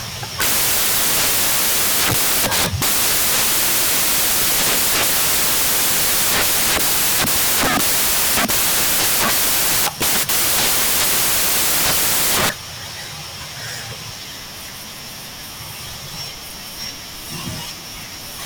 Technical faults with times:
0.00-18.45 samples built from the wrong bytes

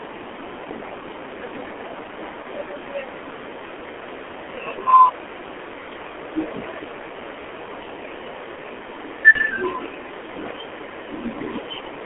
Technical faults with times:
0.00-12.05 G.723.1 codec
2.42-2.47 VoIP packet loss concealed by the speech codec
9.32-9.38 VoIP packet loss concealed by the speech codec

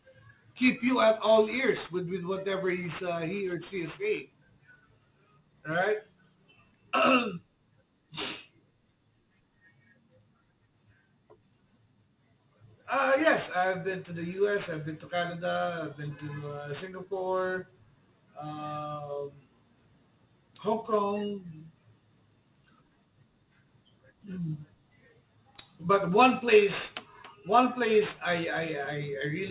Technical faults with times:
0.00-29.51 aliasing

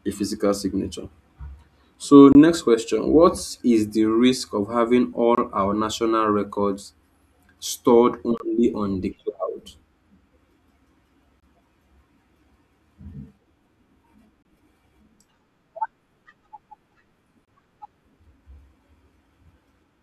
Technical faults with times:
2.32-2.35 gap between chunks
5.35-5.38 gap between chunks
8.38-8.40 gap between chunks
11.40-11.43 gap between chunks
14.43-14.45 gap between chunks
17.45-17.48 gap between chunks

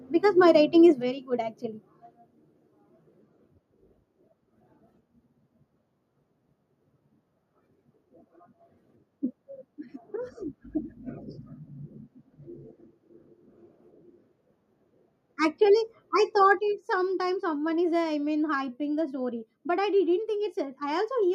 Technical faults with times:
0.45-0.51 microphone overload
1.02 microphone volume stepped down
16.59 microphone volume stepped down

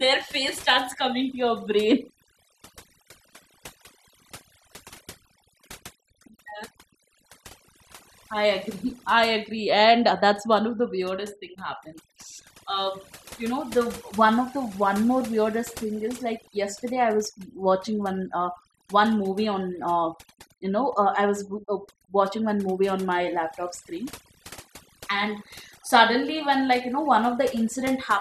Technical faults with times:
0.00-28.21 overdone noise removal

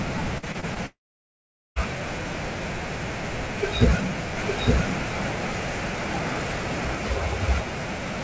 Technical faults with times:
0.38-0.78 repeated packet loss (robotic sound)
0.86-1.78 long network dropout
4.37-6.95 doubled audio track

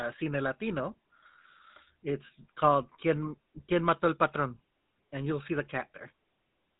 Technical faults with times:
0.00-6.79 GSM full-rate codec

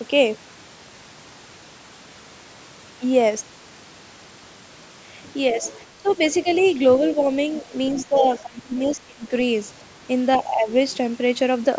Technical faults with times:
5.54-6.64 speech suppressed in double talk
5.62-8.95 other side's voice leaking through
7.92-9.31 speech suppressed in double talk
10.41-10.70 speech suppressed in double talk

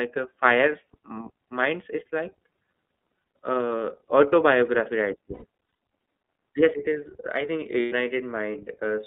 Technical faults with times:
0.00-9.07 iLBC codec
5.34-5.45 lost iLBC frames
6.74 CD skip
7.80-7.93 lost iLBC frames

